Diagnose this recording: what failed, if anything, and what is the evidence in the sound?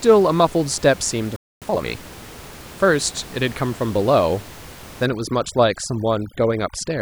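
Playback stage: a playback stall at 1.36 s cuts the speech off mid-flow, leaving about 0.25 s of silence until 1.62 s. The gap likely comes from the player's buffer running dry or its output thread being blocked, so nothing reached the output.

Playback stage again: from 1.62 to 1.86 s the resumed speech is a time-compressed catch-up, running at twice normal speed with the pitch unchanged. The player is discarding small segments and cross-fading the joins to clear its backlog.

Call processing stage: from 5.06 s to the end, overdone noise removal takes over. The room noise, about 20 dB below the speech, collapses into near silence with twinkling specks, and quiet parts of the voice go with it as bands near the noise estimate are gated away.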